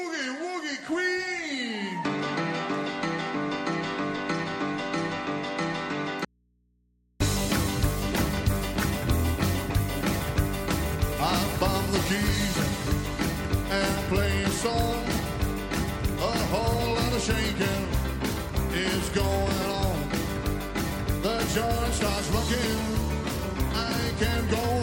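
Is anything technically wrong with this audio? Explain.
Yes. From 6.25 to 7.20 s there is an audio dropout to a faint residue. The signal feed was likely interrupted while the path downstream stayed live, so the sound cuts off abruptly for about 0.95 s, leaving only mains hum roughly 40 dB below the normal level.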